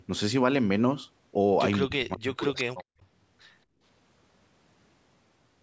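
From 1.85 to 2.95 s, the speech is suppressed in double talk. The voice dips and breaks up for about a second, falling by roughly 40 dB at its deepest. The likely cause is both sides talking at once. The echo canceller then turned down the near talker along with the loudspeaker echo.

Inside that stretch, from 2.78 to 2.84 s, there is an echo leak. A faint delayed copy of the voice slips through, around 30 dB below the speech. It arrives 219 ms late. The likely cause is a speakerphone echo canceller that missed part of what its microphone caught.

At 3.66 to 3.82 s, the background is gated by the echo canceller. The room sound drops by about 19 dB for a brief moment, then returns. The canceller clamped the microphone while the loudspeaker played, then released it.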